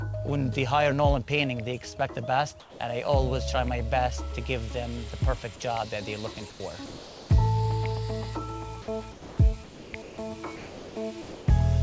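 From 2.60 to 2.80 s the real background gives way to comfort noise in place of the background, likely from discontinuous transmission: the sender went quiet and the receiver synthesised noise. The background sits about 23 dB below the loudest sound, and the fill comes in about 4 dB quieter. On a spectrogram the textured background becomes a smooth, uniform wash, and the waveform shows a slightly narrower, even band. The spectrogram is empty above 8 kHz throughout, which fits a wideband call codec such as G.722.

At 6.34 s a brief sound dropped by the voice detector loses about 10 ms, likely because the detector mistook quiet sound for background. It is heard as a tiny clipped edge, visible as a sliver where the waveform envelope drops abruptly into flat noise. Comfort noise continues to 6.60 s, and again from 6.86 to 7.30 s, where the background sits about 19 dB below the loud parts and the fill is about 1 dB quieter. 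That level shift is barely audible, but the spectrogram still loses its fine texture.

From 8.82 to 9.38 s the sound is chopped by the voice detector, which likely toggled between sending and not sending more than once. About 0.32 s is replaced, so the sound stutters. On a spectrogram this appears as alternating patches of detailed and smeared energy, and the waveform shows ragged gaps.

Comfort noise fills 9.64 to 10.18 s. Two more drops follow. From 10.56 to 10.96 s about 0.29 s of sound is lost, and from 11.22 to 11.48 s about 0.16 s is lost, each likely caused by the detector missing quiet sound. Each is heard as sound cut short into steady hiss, then resuming. The waveform shows the envelope collapsing to a flat noise floor, and the spectrogram shows harmonic or transient detail ending in a featureless band.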